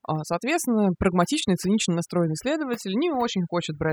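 A speech recording with overdone noise removal throughout: the noise reduction was set too aggressively, so frequency bands sitting near its noise estimate are cut deep or switched off, taking quiet speech detail with them. Pauses collapse into near silence flecked with twinkling specks.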